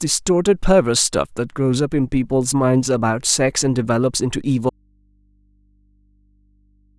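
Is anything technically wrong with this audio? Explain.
Yes. There is an audio dropout to a faint residue from 4.70 s that lasts to the end of the clip. The speech cuts off abruptly, and what remains is a low mains hum, roughly 40 dB below the earlier speech level. The cause is likely a break in the feed ahead of a stage that stayed live, so the open input keeps passing hum. The sudden switch, with no fade, sets it apart from a natural pause.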